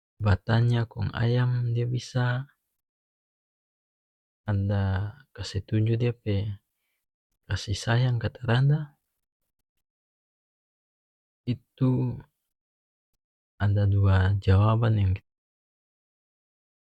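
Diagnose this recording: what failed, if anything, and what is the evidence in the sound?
Nothing stood out on listening to this speech recording, and the gentle fade-out that begins around 15 s and ends at 15.23 s sounds like an ordinary deliberate edit.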